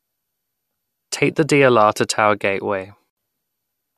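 At 3.10 s the speech falls into a digital broadcast dropout, a 72 ms hole of silence ending at 3.17 s. The receiver muted on lost or corrupted frames, which fits about three lost frames. Unlike analogue fading, there is no hiss or gradual weakening.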